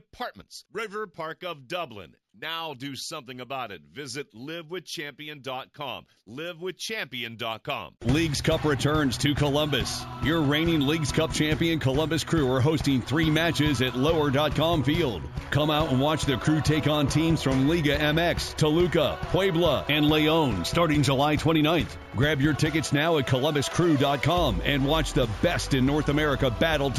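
Throughout the clip there is imaging from linear upsampling, consistent with 16 kHz material raised to 48 kHz by straight-line interpolation. The top of the band is dulled, and a faint mirrored copy about 25 dB down fills 8 to 16 kHz, adding a light metallic shimmer. A spectrogram shows that band reflected upward.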